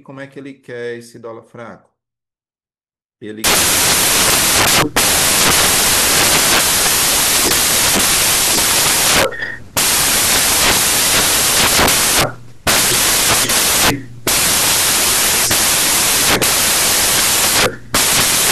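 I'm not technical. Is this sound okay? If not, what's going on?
No. From 3.44 s to the end, the speech turns into loud hiss: samples built from the wrong bytes, so each sample's bytes are assembled wrongly into noise.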